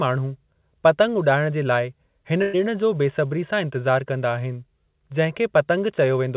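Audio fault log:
2.42–2.55 s, burst of packet loss: about 120 ms of speech never arrived in time, so the receiver spent roughly 112 ms extending the last sound it had and lowering it as it went. The sound stretches into a held, fading tail, then speech jumps ahead with a piece skipped. On a spectrogram the preceding pattern freezes into flat, dimming bands under the 4 kHz ceiling of the call band; the waveform shows repeating cycles shrinking, then an abrupt restart.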